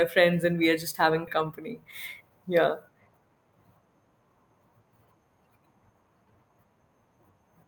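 A speech clip with a skip ahead at 1.27 s, right after "we are just having": roughly a second and a half vanishes, and the two sides butt together with no silent gap, unlike a dropout. Then a jitter buffer speed-up runs from 1.37 to 3.52 s at 111% speed, trimming about a third of a second in tiny pitch-period cuts, so speech sounds hurried but keeps its pitch, unlike a resampling error.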